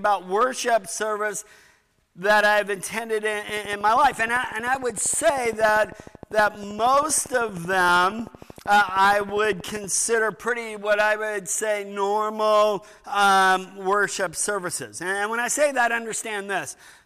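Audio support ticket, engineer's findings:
Train of clicks, 3.49–9.85 s. Regular ticking at 12.8 per second, about seventy clicks, roughly as loud as the signal. Likely interference from nearby equipment or a faulty connection or power supply.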